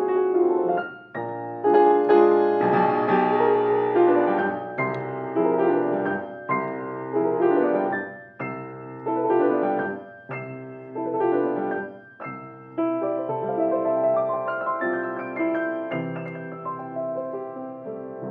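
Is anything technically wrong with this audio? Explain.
No, no technical faults present.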